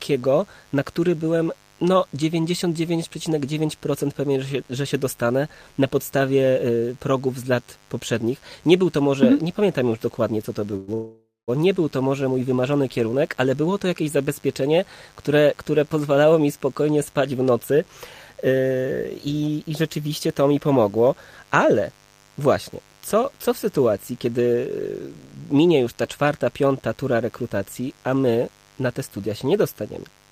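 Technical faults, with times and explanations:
Throughout, mains buzz: switching spikes from a dimmer, rectifier or unshielded lead inject 50 Hz harmonics, heard as a steady raspy buzz about 30 dB below the speech.
10.76 to 10.90 s and 10.94 to 11.50 s, call audio freeze: packets likely stalled and the jitter buffer emptied, so the last sound stretches into a fading buzz or hiss, the second time reaching about 0.19 s of silence, before speech resumes with nothing lost.
17.14 to 17.80 s, 18.48 to 19.49 s and 23.79 to 24.65 s, jitter buffer speed-up: an overfull buffer was trimmed by dropping short pitch-period slices, so speech runs 7 to 8% faster at unchanged pitch and sounds hurried.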